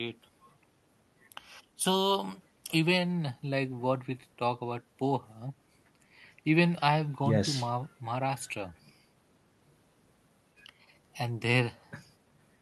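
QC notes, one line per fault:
Nothing stood out on listening to this speech recording.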